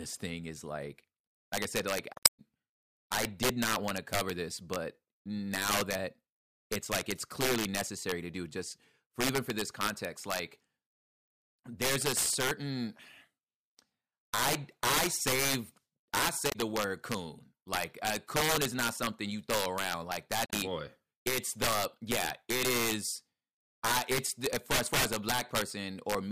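Integer overflow runs through the whole speech clip. The level is pushed roughly 7 dB past full scale, and instead of being held at the limit, the loudest peaks wrap around to the opposite sign. Only a small fraction of samples go over, about one or two percent, but each one jumps across the entire range. That produces violent, splintering cracks on the loud syllables. Clipping would flatten those peaks into a duller buzz, so the sharpness of the cracks is what marks this as wraparound.

Damaged data in a compressed stream is heard three times. It occurs from 2.13 to 2.40 s after "like i said like", from 16.49 to 16.55 s between "i i save i" and "the word coon like", and from 20.46 to 20.53 s between "you throw around like" and "boy it's the yeah". Each time the decoder hits corrupt frames, loses sync and hunts for the next valid header. The result is a brief chirp, squawk, click or short hole in the speech.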